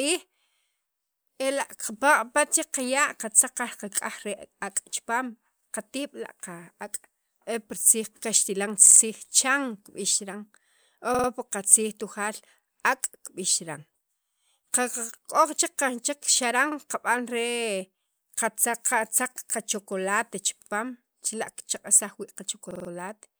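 At 8.87–9.01 s, 11.15–11.29 s, 16.72–16.77 s, 20.62–20.71 s and 22.71–22.90 s, the speech stutters: repeated buffer faults, where playback ran short of fresh audio and replayed the last block of about 46 ms, which fits a 2048-sample buffer. Each repeats one to four times, with a hard join and no audio skipped. On a waveform, identical 46 ms segments sit side by side; a spectrogram shows the same slice copied, with vertical seams at each join.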